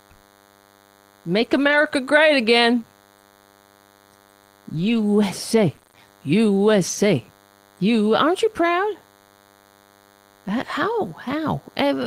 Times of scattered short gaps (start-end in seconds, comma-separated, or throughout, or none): 1.39-6.97